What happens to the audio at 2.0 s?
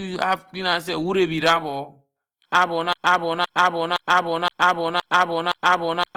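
At 2.0 s the speech has a grainy, rough texture, present throughout the clip. This is likely Opus compression at a low bitrate, which fills starved bands with noise.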